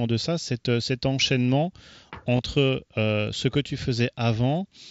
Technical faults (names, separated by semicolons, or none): concealed Bluetooth headset packet loss